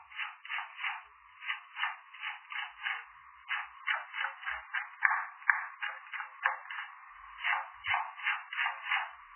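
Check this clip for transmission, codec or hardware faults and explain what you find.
One fault runs through the whole clip. Throughout, the audio sounds dull, watery and swirly, with nothing above 3.1 kHz and attacks smeared, heavy damage that likely comes from MP3 compression at a very low bitrate, around 8 kbps. Starved of bits, the encoder cuts the treble and drops weak frequency components that flicker between frames.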